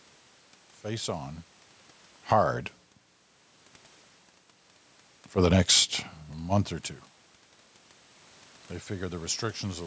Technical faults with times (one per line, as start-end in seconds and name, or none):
2.16-2.47 automatic gain falling
2.38-2.86 automatic gain rising
7.95-9.29 automatic gain rising